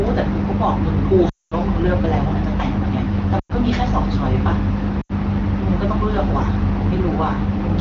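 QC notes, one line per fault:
1.29–1.54 s, 3.39–3.52 s, 5.01–5.12 s: lost AMR speech frames. The AMR-WB decoder repeats the last good pitch and vocal-tract settings at falling gain, so each gap smears then fades quickly. The longest, 0.25 s, fits about eleven dropped frames, and each time the speech resumes briefly weak.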